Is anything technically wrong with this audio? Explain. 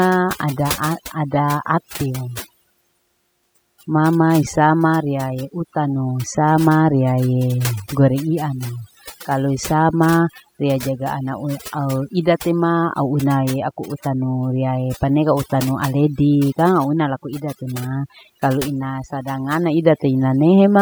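Yes. Throughout the speech, the pauses drop to near silence dotted with twinkling specks. This is overdone noise removal: an over-aggressive noise reducer shuts off individual frequency bands near its noise estimate, stripping quieter vocal detail with them.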